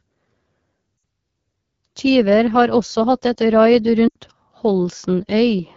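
A speech clip carried over the AMR wideband (HD Voice) codec at a low mode, which fits 8.85 kbit/s. Above 6.4 kHz it synthesises only shaped noise, and this mode leaves the speech plainly rough and raspy throughout. Lost AMR speech frames failed their radio checksum, so the decoder extrapolated earlier pitch and vocal tract settings with falling gain. This gives a gap that drops to near silence within two frames from 0.97 to 1.03 s (60 ms, about three frames) and from 4.08 to 4.16 s (80 ms, about four frames) just after "hatt et raid". Each gap leaves a weak, rough recovery.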